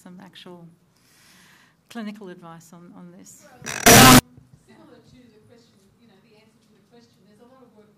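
From 3.86 to 4.19 s the audio turns abruptly into a loud, harsh, nearly square waveform at a nearly fixed, high level, with background noise raised to the level of the main sound. This is likely float read as integer: 32-bit float samples interpreted as 32-bit integers, so the sign and exponent bits dominate each value.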